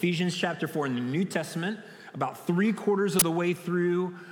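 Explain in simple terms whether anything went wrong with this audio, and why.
Something went wrong at 3.19 to 3.22 seconds. That short, harsh burst of noise is an uninitialised buffer. The player sent out a chunk of memory before any sound was written into it.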